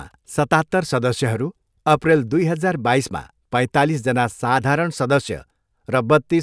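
No technical faults can be heard at any point in this speech.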